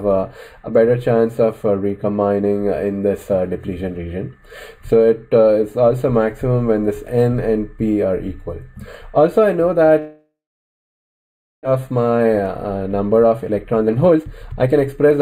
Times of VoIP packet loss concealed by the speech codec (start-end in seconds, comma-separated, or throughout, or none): none